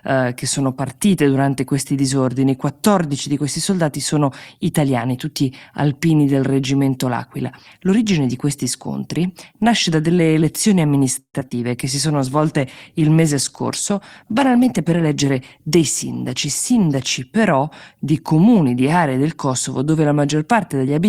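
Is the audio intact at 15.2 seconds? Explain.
No. At 15.2 s the speech sounds rough and muffled, from a call bitrate drop between 12.10 and 17.27 s, which fits the encoder falling from about 64 to 19 kbps and losing high frequencies. It also sounds hurried at unchanged pitch, from a jitter buffer speed-up between 14.24 and 15.82 s that plays about 9% fast by trimming pitch periods, roughly 150 ms in total.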